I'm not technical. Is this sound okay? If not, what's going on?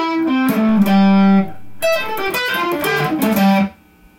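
No. A low thump comes at 0.69 s and another at 2.28 s, while the sound itself carries on unchanged. This is a DC step: the recording's resting level suddenly shifts off centre, holds there, then snaps back, and each jump thumps.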